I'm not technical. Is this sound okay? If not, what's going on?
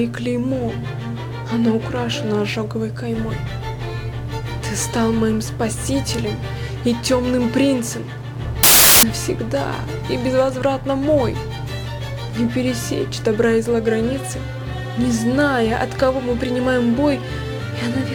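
No. Samples built from the wrong bytes, from 8.63 to 9.03 s: for that brief moment, the player pieces each tiny slice of the sound together from the wrong parts. The result is a burst of loud hiss.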